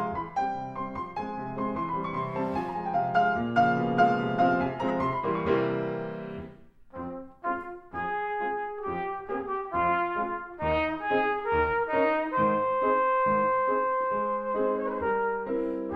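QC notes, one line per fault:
4.88–4.90 s, corrupt frame decoded: a short chirp-like blip, peaking around -25 dBFS, lasting about the length of a single compressed frame. Damaged bits inside that frame were still decoded, so misread gains and codes put energy at the wrong frequencies until the next clean frame took over. Unlike a click or dropout, it is a burst with spectral content of its own that doesn't belong to the surrounding sound, not a sharp step.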